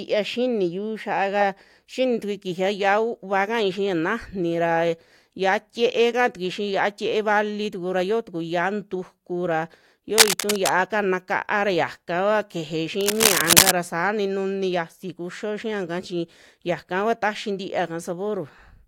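At 10.11 to 10.70 s, cable scratch noise breaks over the speech. Dense, uneven crackling bursts rise a little above it. A worn cable or connector being moved is the likely cause. It returns from 13.01 to 13.71 s, just before "saa ni".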